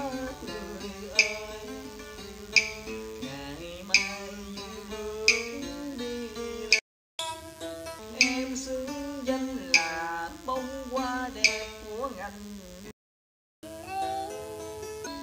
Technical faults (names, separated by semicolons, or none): DECT cordless phone buzz; playback stall; catch-up at higher speed